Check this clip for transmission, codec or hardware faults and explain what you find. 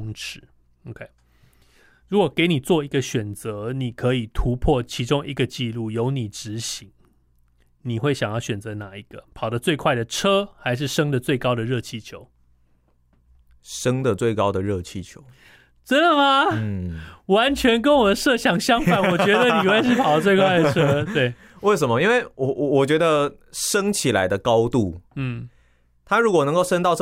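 Nothing faulty can be heard anywhere in this speech.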